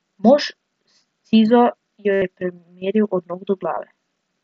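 At 2.13 to 2.22 s, a run of voice packets between headset and phone went missing, about 90 ms in all, and the phone filled the gap by repeating the best-matching recent stretch of waveform. This concealed Bluetooth headset packet loss sounds like a buzzy held tone at full level, with a slight warble as real audio resumes. A shorter loss at 3.75 to 3.77 s, about 22.5 ms, sits against the light graininess of the wideband mSBC link.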